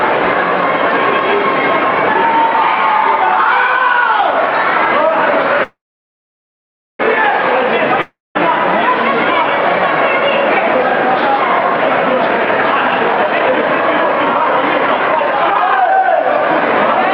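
At 5.63 s the audio stalls in a call audio freeze, likely from packets held up in transit while the jitter buffer ran dry. The last sound carries on as a fading buzz, then about 1.22 s of silence, resuming at 7.01 s exactly where it stopped. Nothing is lost, only delayed by about 1.36 s.

From 8.01 to 8.37 s a long network dropout follows, likely caused by packets that never arrived. A brief fading tail gives way to about 0.19 s of silence. Unlike the freeze, the audio comes back further on, with about 0.34 s missing.

From 12.22 to 16.18 s a jitter buffer speed-up plays the sound at about 130% of normal pace. The receiver trims pitch-period-sized slices repeatedly to shed the accumulated delay, roughly a second in all. Pitch stays unchanged, so the sound seems rushed rather than higher.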